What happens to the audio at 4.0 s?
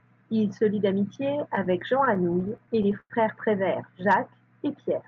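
Nothing goes wrong at 4.0 s: the speech carries on intact there, with only the ordinary coding character of the call path, whose band tops out around 8 kHz.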